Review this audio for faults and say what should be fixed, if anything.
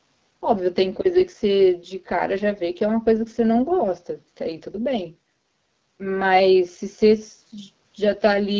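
The AMR wideband (HD Voice) codec runs at 8.85 kbit/s throughout, one of its two lowest rates, leaving the speech audibly rough and raspy. Negotiate 12.65 kbit/s or higher for the call so the codec has enough bits to code speech cleanly.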